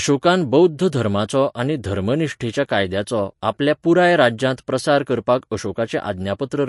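Throughout the speech, plainly audible damage points to MP3 compression as the likely cause, at a rate that fits about 48 kbps. Starved of bits, the encoder drops weak frequency lines frame by frame, giving a watery, swirling texture, and nothing remains above 11.3 kHz.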